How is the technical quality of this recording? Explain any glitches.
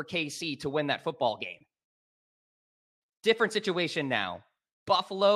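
The recording has one glitch, a dropout in level partway through the speech.

From 1.86 to 3.02 s, just after "win that football game", a 24-bit alignment error makes the audio too quiet. Samples held in the low 24 bits of a 32-bit word were read as full 32-bit values, dropping the level by about 48 dB. The speech stays clean but nearly vanishes, with abrupt level jumps at both edges. On a waveform the trace collapses to an almost flat line; on a spectrogram that stretch goes dark, bounded by sharp vertical edges.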